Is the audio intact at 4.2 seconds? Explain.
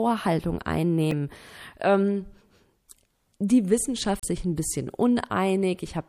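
No. From 4.17 to 4.24 s there is damaged data in a compressed stream. Corrupted frames throw the decoder out of sync, giving a brief squawk or blip. Under it, the whole clip has a watery, swirly sound. This is likely MP3 compression at a rate that fits about 64 kbps.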